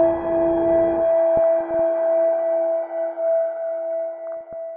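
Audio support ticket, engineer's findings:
DAB burbling, 1.37–1.80 s and 4.27–4.54 s: weak reception, residual bit errors near 0.15 and 0.2 percent corrupting MP2 sub-band samples and scale factors. Short noise blips and sub-band level jumps over programme.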